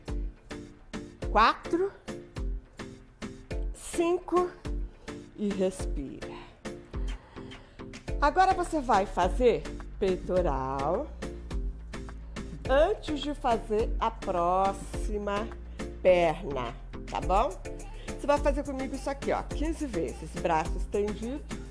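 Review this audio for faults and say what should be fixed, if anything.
Nothing here needs fixing, as the signal holds steady throughout with no audible technical fault at any point.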